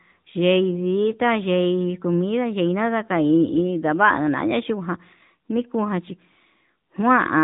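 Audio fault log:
Throughout: AMR narrowband mobile codec. Nothing passes above about 3.8 kHz, so the speech sounds boxed and phone-like. The plainly audible buzzy, synthetic edge comes from a vocal-tract model rebuilding each short frame. This fits a mid AMR-NB rate near 10.2 kbps.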